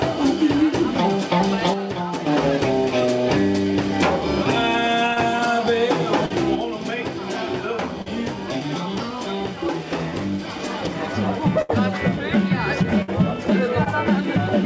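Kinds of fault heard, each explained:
One channel drops out: Twice the level suddenly sinks by about 6 dB, first from 1.74 to 2.27 s, then from 6.55 s right through to the end. That pattern of a common-content drop is what you'd get if one stereo channel likely went dead before the mono fold-down, leaving half the signal to carry everything.
Short concealed packet loss: Tiny holes of about 20 to 40 ms show up at 5.14, 6.26, 8.02 and 13.84 s, heard as a quick smear or wobble. The receiver papered over each gap by extending the last bit of sound, pitched if it was tonal and noise-like if not, then crossfaded back in.
Burst of packet loss: Longer gaps of around 60 ms land at 11.62 and 13.02 s. Here the concealment runs longer, about 70 and 55 ms, carrying the last sound forward as a held buzz or fading hiss while turning it down. Playback then picks up further along, so the missing chunk just isn't there. 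All of this sits on a call path with nothing above 8 kHz, which fits G.722.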